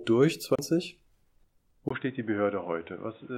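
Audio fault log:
0.55–0.59 s, CD skip: a tick and a brief mute of roughly 30 ms, then the sound resumes from a different point, unlike a plain dropout, which resumes where it stopped.
1.89 s to end, input switched to a poorer device: after a 20 ms silence the band stops at 3.8 kHz, level drops about 5 dB, and new noise appears about 30 dB down. This is likely a device change rather than a filter.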